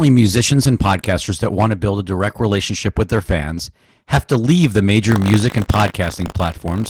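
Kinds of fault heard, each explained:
Opus voice compression: The speech sounds plainly muffled and hoarse, with a slightly robotic edge. At 16 kbps the codec runs in hybrid mode, a linear-prediction speech coder with a transform layer above 8 kHz, coarsely coding excitation in 20 ms frames.
Buffer tearing: From 5.06 s, right after "have to leave the", a 50 Hz robotic buzz rides on the speech to the end. Writer and reader of the playback buffer have slipped, so a small slice of each 20 ms period replays audio roughly 40 ms old.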